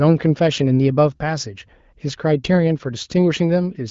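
No technical faults occur at any point in the audio, which comes through an AMR wideband (HD Voice) codec path that is working as intended.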